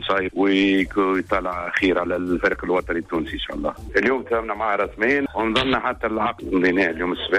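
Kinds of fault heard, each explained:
No technical fault can be heard anywhere in the signal, with no dropouts, clipping, noise bursts or timing disturbances.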